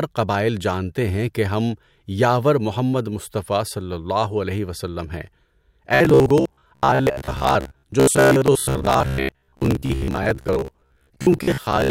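From 5.95 s to 11.90 s the speech becomes robotic sound from repeated short buffers, a rigid metallic buzz at 66.7 Hz loosely following the syllables. About half the audio is likely replaced by looped 15 ms fragments. Unlike dropouts, no silent gaps appear.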